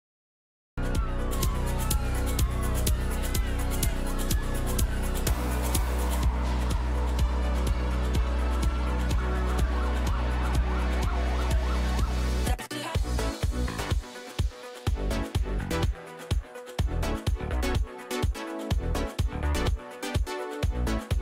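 The audio opens with digital silence and jumps in at 0.78 s partway through a sound, with no attack or fade. This cut-off start means capture began late. Unlike a quiet intro or slow fade-in, there is no build-up at all, only a hard entry mid-sound.

From 1.33 to 6.22 s the treble is strongly exaggerated, about 13 dB higher at 10 kHz relative to 1 kHz. This is pre-emphasis left on: the boost follows the standard FM 75 µs curve, but the matching de-emphasis was never applied. It sounds thin, bright and sibilant. Unlike a resonant EQ peak or aliasing, the lift is a smooth tilt that keeps rising toward the top of the band.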